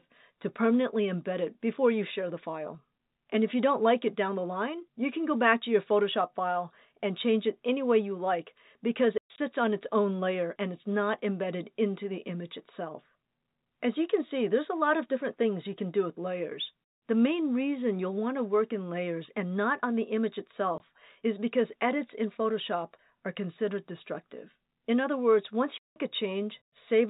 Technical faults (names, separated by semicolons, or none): packet loss filled with silence